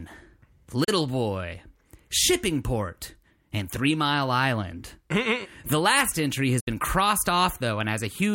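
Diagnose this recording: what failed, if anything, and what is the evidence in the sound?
The broadcast reception chain failed with a digital broadcast dropout: the speech fades out over about 8 ms and goes silent from 0.84 to 0.89 s, then again from 6.60 to 6.68 s. The 32 ms and 64 ms holes fit the receiver muting one and then two bad frames, so that audio is gone.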